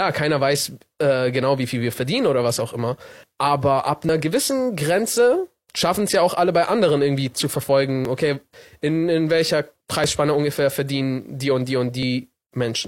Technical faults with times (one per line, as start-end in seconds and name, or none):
4.09 overlap between stream segments
8.05-8.09 overlap between stream segments
10.04-10.08 overlap between stream segments
12.03-12.05 overlap between stream segments